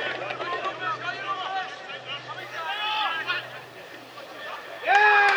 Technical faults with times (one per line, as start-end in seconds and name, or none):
2.39-5.37 low bit depth without dither